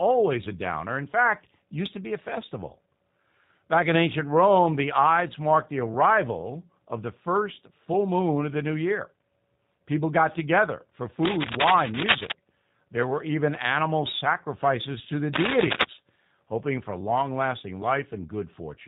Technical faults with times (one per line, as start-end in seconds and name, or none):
0.00-18.87 G.729 codec
11.23-12.32 cable scratch noise
15.34-15.85 cable scratch noise